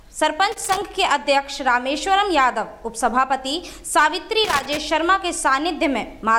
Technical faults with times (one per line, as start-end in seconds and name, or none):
0.52-0.82 loose connector crackle
4.44-4.77 loose connector crackle